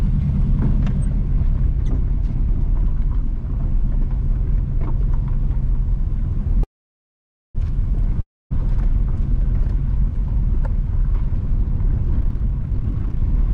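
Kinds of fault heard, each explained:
Call audio freeze: From 6.63 to 7.57 s the sound stops and the last fragment trails off into about 0.88 s of near silence before resuming where it left off. Nothing is lost, but the 0.91 s gap adds delay, likely because delayed packets emptied the jitter buffer.
Long network dropout: At 8.21 to 8.52 s the sound breaks off, fades briefly, then falls to about 0.25 s of silence. It returns further along, with about 0.3 s of audio missing for good, likely because no packets arrived during that stretch.
Jitter buffer speed-up: From 12.20 s to 13.51 s the sound runs at 149% speed with its pitch unchanged, so it sounds rushed. Short pitch-period slices were cut again and again to drain a buffer that had grown too full, removing roughly 0.7 s.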